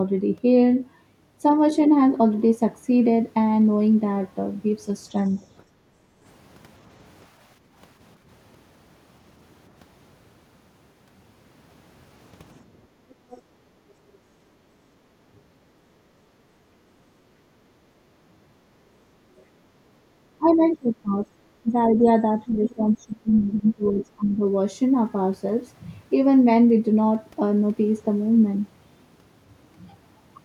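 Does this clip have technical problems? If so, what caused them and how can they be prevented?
Yes. The clip is speech, and it has three echo-canceller faults.

Background gated by the echo canceller: the room sound dips at 5.65–6.24 s and 7.58–7.76 s (about 9 dB each), at 12.66–14.15 s (about 7 dB) and at 16.3–17.6 s (about 11 dB). Each time, the canceller sensed loudspeaker playback and clamped the microphone gain, so the ambience drops and then recovers when it releases. Prevention: use comfort-noise fill and a gentler, slower-releasing suppressor so the background level stays constant during playback.

Other side's voice leaking through: faint far-end speech appears at 13.1–13.37 s at about 25 dB below the talker, and briefly at 19.38–19.43 s at about 40 dB below. This is likely residual echo that the canceller's filter failed to model, perhaps because the acoustic path changed or the filter had not fully converged. 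Prevention: lower the loudspeaker level, keep the device away from reflective surfaces, and make sure the canceller gets a correctly aligned reference signal.

Speech suppressed in double talk: from 20.38 to 24.43 s the talker's voice repeatedly dips, by as much as roughly 20 dB and for around three seconds in total. Both sides were talking at once, and the canceller likely treated the near-end voice as echo and attenuated it along with the loudspeaker pickup. Prevention: use a headset, or a canceller with robust double-talk detection that freezes adaptation and eases suppression while the near-end talker is active.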